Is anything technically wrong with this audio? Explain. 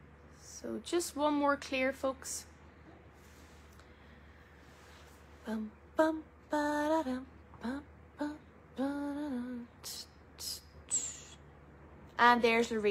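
No, nothing is technically wrong with this audio.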